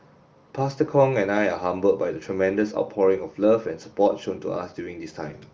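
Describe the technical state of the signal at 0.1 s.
At 0.1 s the speech is intact, with no fault, and the AMR wideband (HD Voice) coding at 23.05 kbit/s leaves at most faint damage there.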